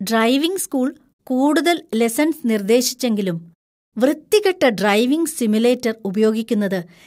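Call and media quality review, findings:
Underrun with held sample, 1.93 s, just after "ഡ്രൈവിംഗ് സ്കൂൾ കൂടുതൽ". Output buffer briefly empty; converter held last value, so the waveform flattens for about 0.67 ms, consistent with a 32-sample shortfall. Under a millisecond of live speech lost.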